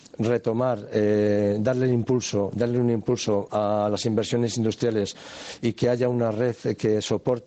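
Gain pumping runs the whole way through: the gain swings by about 10 dB, likely from input gain set too high feeding a fast limiter.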